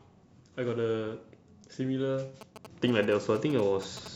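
From 2.41 s to 4.08 s the speech picks up GSM signalling bursts: a galloping dit-dit-dit run of short buzzes pitched near 217 Hz, sitting roughly 15 dB below the speech. A nearby 2G phone is exchanging brief groups of radio bursts with the network rather than carrying a call, and the audio circuitry rectifies that RF envelope, turning the 217 Hz burst rhythm into audible interference.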